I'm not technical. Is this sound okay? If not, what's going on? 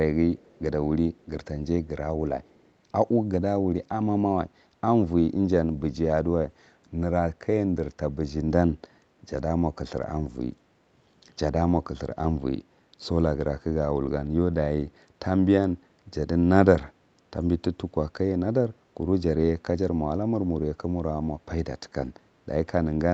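No. At 0.36 to 0.6 s and 2.43 to 2.71 s, a very faint repeat of the speech follows about 0.22 s behind. This is likely an echo leak from a loudspeaker. It's a separate, delayed copy, unlike room reverberation, which blurs straight into the sound.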